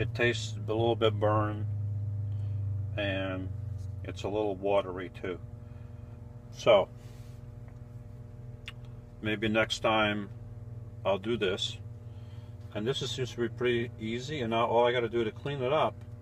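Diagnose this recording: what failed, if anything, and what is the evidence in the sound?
Mains hum in the analogue wiring: a steady 60 Hz tone sits under the whole clip, roughly 20 dB below the signal, likely a ground loop coupling the power line in.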